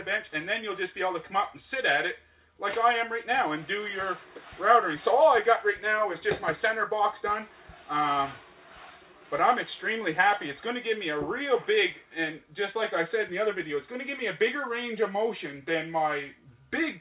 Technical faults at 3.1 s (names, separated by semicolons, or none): none